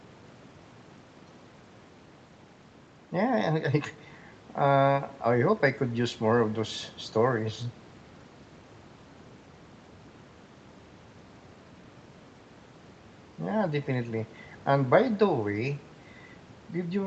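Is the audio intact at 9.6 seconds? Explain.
Yes, at 9.6 seconds the speech is intact, with only the normal band limit of a call path that carries nothing above about 8 kHz.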